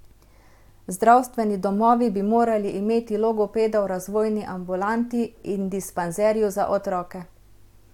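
Nothing technical stands out in this bit of speech; it runs along with no audible glitches or faults to point to.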